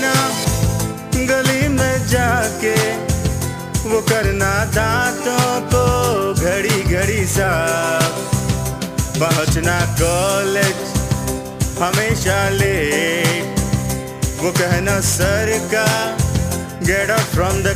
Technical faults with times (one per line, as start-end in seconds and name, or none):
0.00-17.75 sample clock jitter